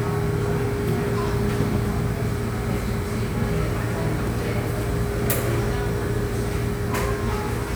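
There are no technical faults to describe in this recording of sounds.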